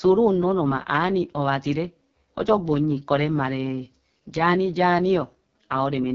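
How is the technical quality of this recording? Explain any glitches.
The technical quality is poor. Throughout the speech, the sound is rough and raspy, with nothing at all above 7 kHz. That is the AMR wideband (HD Voice) codec working at its lowest setting; the heavy damage fits a rate of about 6.6 kbit/s. The codec rebuilds speech from a pulse-excited vocal tract model, and at this rate too few bits describe those pulses, so the voice turns grainy. The narrow top band is only shaped noise.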